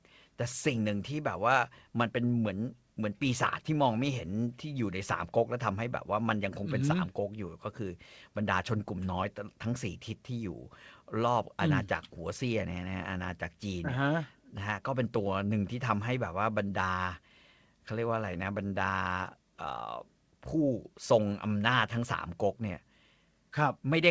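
Nothing goes wrong anywhere in this speech recording, which simply reaches you over a call link whose band tops out at 8 kHz, a ceiling that fits a G.722 codec.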